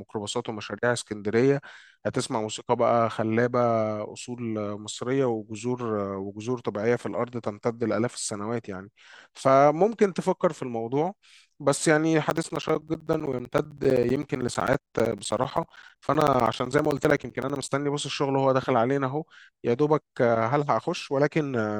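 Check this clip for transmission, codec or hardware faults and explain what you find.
One hardware fault appears in the speech. From 12.3 s to 17.69 s there are periodic USB or driver dropouts. Every 64 ms, something stalls the bus or driver. Around 10 ms of audio becomes silence each time, about a hundred gaps. They sound like steady ticks under the speech.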